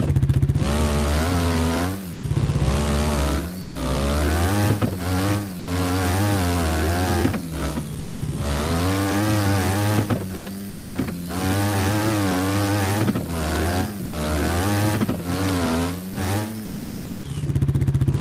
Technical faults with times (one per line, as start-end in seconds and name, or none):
2.13-2.23 sound dropped by the voice detector
3.61-3.75 sound dropped by the voice detector
5.59-5.67 sound dropped by the voice detector
7.99-8.21 sound dropped by the voice detector
10.37-10.95 sound chopped by the voice detector
14.05-14.13 sound dropped by the voice detector
16.13 sound dropped by the voice detector
16.65-17.23 sound dropped by the voice detector